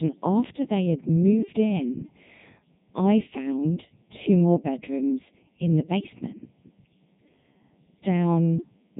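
From start to finish the speech carries channel delay (comb filtering). One channel arrives a fraction of a millisecond behind the other, and when the two are summed to mono, the content they share cancels at regularly spaced frequencies. The first notch falls around 1.5 kHz, with further ones stacked evenly above it. The result is a hollow, phasey colouration that never moves, because the offset between the channels stays fixed for the whole clip.

The same speech has also passed through the Codec 2 vocoder, and the damage is heavy throughout. Rather than preserving the waveform, this coder reduces the voice to pitch, voicing, energy and a coarse spectral envelope, then rebuilds it from sine waves at the decoder. What comes out is buzzy and robotic. The degradation points to the codec's highest 3.2 kbit/s mode, and nothing survives above 3.8 kHz, which leaves the top end dull and narrow.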